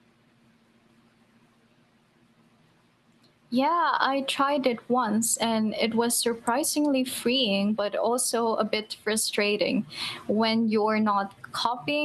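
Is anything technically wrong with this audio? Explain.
No, nothing technically wrong turns up in this speech recording, so there's nothing here to flag.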